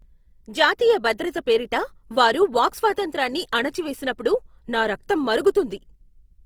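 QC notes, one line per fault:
Throughout: Opus compression. The speech sounds plainly grainy and rough, with noisy band-filling, likely from Opus in its CELT mode at a rate that fits about 24 kbps. A spectrogram shows harmonics dissolving into speckled noise, with energy reaching 20.2 kHz.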